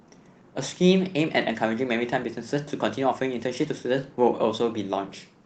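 Clock drift between sender and receiver runs through the whole speech clip. The sending side's audio clock ran roughly 4 percent fast against the receiving side's, so audio arrived faster than it was played out and the jitter buffer kept filling up. To avoid falling further behind, the receiver had to keep discarding small slices of audio. That produces a faint, uneven rushing feel rather than one obvious glitch, and it sets up the edits described next.

Repeated timing corrections run from 0.04 s to 5.44 s, with playback pushed along at about 104 percent of real time. Each correction trims a short piece so the receiver stays in step with the faster sender. Every edit goes the same way, always a cut and never a repeat, but they fall at irregular intervals. The result is a tempo that feels slightly unsteady, with small hiccups. All of this passes through the call path, whose coding sounds consistent with Opus at about 20 kbps and tops out near 8 kHz.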